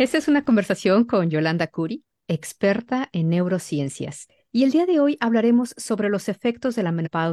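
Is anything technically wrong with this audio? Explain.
Yes. From 7.02 to 7.08 s there is damaged data in a compressed stream: corrupted bytes make the decoder lose frame sync, producing a brief glitch as it searches for the next frame header.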